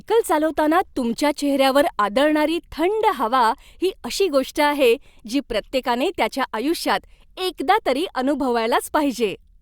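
Nothing's technically wrong in this bit of speech; it's just someone talking, with no dropouts, glitches or distortion to point at anywhere along the way.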